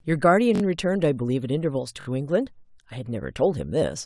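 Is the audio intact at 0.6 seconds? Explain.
No, the speech stutters right there: a repeated buffer runs from about 0.56 to 0.62 s. The device didn't get fresh audio in time, so it replayed the same roughly 21 ms chunk three extra times, which fits a 512-sample buffer. Each repeat butts up against the last with a hard join, so you hear a quick stutter rather than a gap. Practically nothing is lost; playback just stalls in place briefly.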